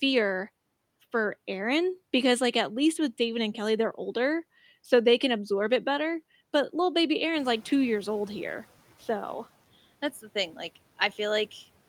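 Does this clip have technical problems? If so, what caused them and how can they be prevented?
Yes. A noise suppressor catching up runs from 7.35 to 8.68 s. The room noise jumps by about 13 dB around seven and a half seconds, and the suppressor's noise estimate lags for 1.33 s, letting the noise through before it sinks by about 8 dB. To prevent this, use a suppressor that updates its noise estimate faster when the noise floor suddenly rises.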